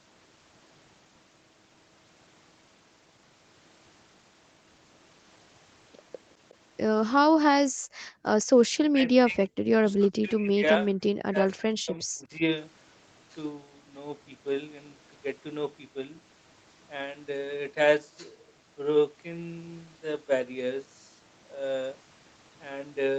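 At 6.49 to 6.54 s there is a brief echo leak. A faint copy of the far side's speech comes back about 364 ms late. It is very quiet, far below the talker. It likely comes from a loudspeaker whose echo canceller let a scrap of its own playback through.

From 7.68 to 8.23 s the background is gated by the echo canceller. The room sound drops sharply, by about 30 dB at its deepest. The canceller clamped the microphone while the loudspeaker was playing. For about half a second the room goes dead. Then the ambience returns.

From 8.87 to 10.93 s the speech is suppressed in double talk. Both sides were likely talking at once. The canceller could not tell the near talker from the loudspeaker echo. It pulled everything down, deeply at its worst. The near voice dips and breaks up in pieces, for about one and a half seconds in total.

The same speech suppression in double talk returns from 11.3 to 12.42 s. 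It is somewhat shallower. The gaps add up to under a second, and the voice again fades and cuts out in fragments.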